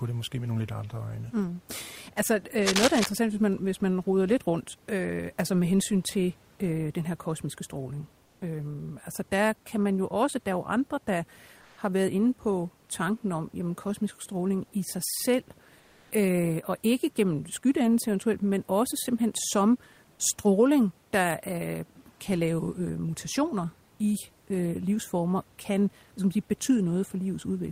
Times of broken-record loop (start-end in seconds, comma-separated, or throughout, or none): none